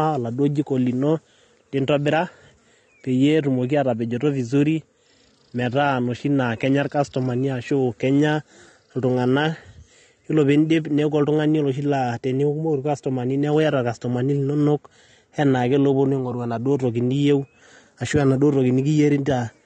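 From start to finish the speech sounds dull and smeared, with nothing above about 9.7 kHz and a watery, warbly fizz on sibilants and held vowels that's plainly audible. That's likely AAC compression, AAC-LC at a low rate, consistent with around 32 kbps. At that budget the encoder drops the top band entirely and quantises what's left so coarsely that gaps and noise-filled patches appear across the spectrum.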